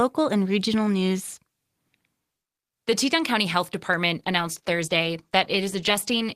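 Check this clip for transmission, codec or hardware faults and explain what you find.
One fault: a call bitrate drop from 4.18 s to the end. The encoder's bit budget collapsed, consistent with roughly 32 down to 14 kbps, so the speech turns coarse, watery and muffled as high frequencies vanish.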